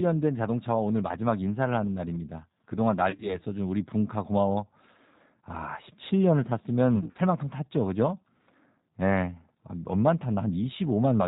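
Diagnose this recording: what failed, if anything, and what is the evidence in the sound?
G.729 codec, throughout, at the codec stage: nothing above 4 kHz, with a rough, synthetic texture that fits 8 kbit/s G.729 rebuilding speech from filter, pitch and sparse pulses.

VoIP packet loss concealed by the speech codec, network stage, at 3.10–3.37 s and 6.96–7.20 s: sound smears into a fading buzz or coloured noise as the decoder extrapolates its last pitch and filter.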